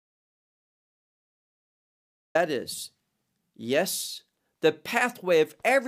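From the very start until about 2.35 s, the speech is simply absent, an audio dropout to silence already under way when the clip begins. The gap is silent with no room tone at all, most likely the input dropping out while recording carried on. Speech then comes in abruptly, mid-flow.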